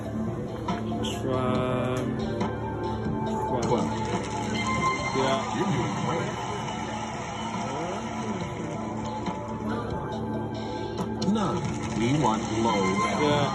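No technical faults can be heard anywhere in the audio.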